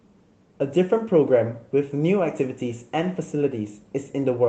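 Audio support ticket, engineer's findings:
Nothing to flag on this speech clip; it came through the call path as expected, with the top end stopping around 8 kHz in a way that fits Opus at roughly 20 kbps.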